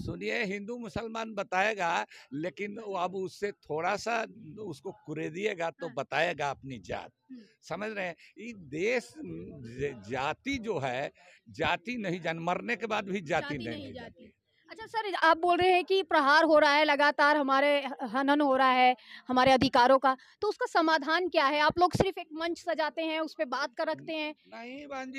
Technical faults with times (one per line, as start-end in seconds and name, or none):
0.00-25.18 crude rate conversion